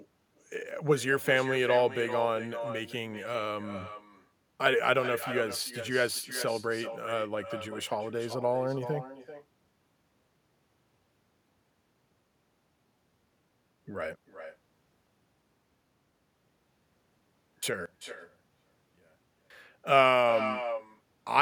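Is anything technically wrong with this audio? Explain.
Yes, there are two faults. Throughout the speech, every phrase is followed by a quieter copy of itself about 11 dB down and roughly 400 ms later. This is echo with no canceller: the far end played the call over a loudspeaker, its microphone picked it up, and nothing removed it before it returned.

From 17.86 to 19.50 s the speech nearly disappears, dropping about 25 dB, with only a small residue left. The likely cause is one channel inverted: with one side's polarity reversed, the shared sound cancels when the channels are summed to mono.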